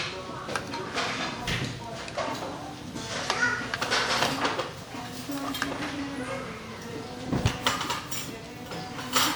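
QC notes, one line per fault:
Throughout, generation loss: likely repeated lossy re-encoding, about five passes of a WMA-style codec near 128 kbit/s, stacks quantisation noise, leaving swirly, hollow, smeared sound with blurred attacks, nothing above 20.1 kHz.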